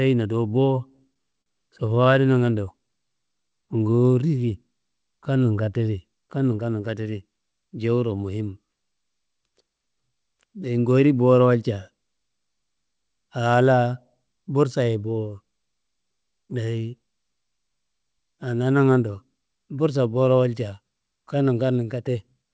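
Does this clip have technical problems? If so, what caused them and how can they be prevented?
Yes. There are three kinds of jitter buffer problem, all heard through a call path whose top end stops at 8 kHz, which fits a G.722 wideband link.

Repeated stalls (stutter) run from 0.88 to 2.16 s, right after "do bo". Packets kept showing up late, so the jitter buffer ran dry ten times. Each time the receiver stretched the last bit of sound to bridge the hole. Those fills add up to about 136 ms, with the longest at 44 ms, so nothing is actually lost, but the speech hiccups and drags for a moment. To prevent this, fix the late, bursty delivery on the network side, or let the buffer hold a bit more reserve on a shaky link.

The jitter buffer slow-down runs from 2.87 to 4.15 s. With the buffer low, the receiver rebuilt its cushion by repeating single pitch periods and slivers of pauses over and over, adding 163 ms. 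That drops the speech to 88% speed at unchanged pitch, so syllables sound drawn out and slightly sluggish. To prevent this, smooth out delivery so the buffer doesn't drain and need refilling mid-sentence.

The jitter buffer speed-up shows up three times. From 6.08 to 7.43 s, just before "jewuro muhim", the speech runs at 111% and roughly 150 ms is trimmed. At 16.31 to 16.55 s it runs at 112%, and at 22.07 to 22.43 s at 109%, with around 40 ms trimmed in each. After packets arrived in a bunch, the buffer held too much, so the receiver snipped out short pitch-period chunks to catch up, leaving those stretches a little rushed at the same pitch. To prevent this, cut down the packet bunching that overfills the buffer.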